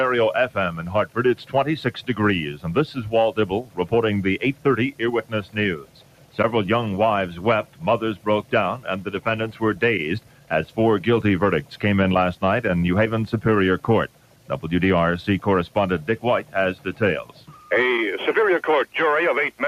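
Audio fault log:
Throughout: noise suppressor applied to music or sounds. A noise suppressor built for speech stays active across the whole clip. It treats steady tones, ambience and reverb as noise and pulls them down. Attacks mostly pass intact. Held parts and tails sink. The gain moves over a range of around 10 dB, so the level rises and falls with the material. The sound therefore pumps, flutters or thins instead of holding steady.
0.47 to 3.93 s, 4.53 to 6.39 s, 7.64 to 9.62 s, 10.2 to 10.77 s, 11.63 to 11.78 s, 14.08 to 14.51 s, 15.68 to 17.71 s: sound cut by the noise suppressor. In these seven stretches the suppressor mistakes the sound for noise and turns it down more than elsewhere. The deepest drops reach about 11 dB, and about 10 dB in the short event at 11.63 s. Sustained or decaying parts lose level or have their decay cut short. Sudden onsets mostly come through. The affected time is about 1.5 s in the first stretch and under a second in most others.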